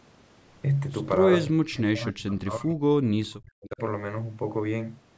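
From 1.45 to 2.86 s and again from 3.11 to 3.81 s, the speech level is pulled down hard, by roughly 40 dB at the deepest point, so the talker nearly vanishes for over a second and then for under a second. This is likely speech suppressed in double talk: with both ends talking at once, the echo canceller could not separate the near talker from loudspeaker echo and attenuated both. Throughout, the call microphone processing leaves nothing above 8 kHz.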